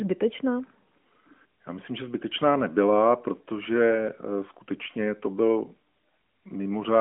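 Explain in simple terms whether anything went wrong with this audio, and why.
Nothing went wrong with this speech recording. It has the narrow, telephone-like sound of the AMR narrowband mobile codec used on older mobile networks, which carries nothing above about 3.7 kHz and leaves only light traces of its own processing.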